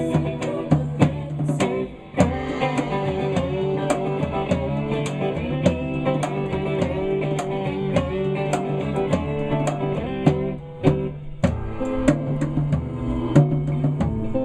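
No technical faults are audible.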